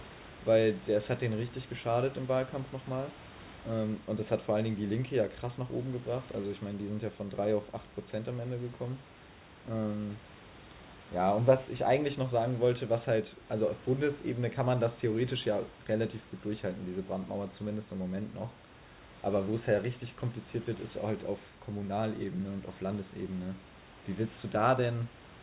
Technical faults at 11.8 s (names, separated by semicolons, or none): none